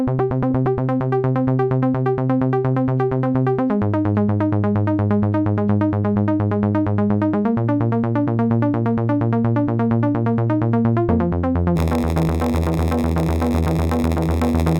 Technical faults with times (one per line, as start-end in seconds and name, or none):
11.75-14.79 block size mismatch (padded)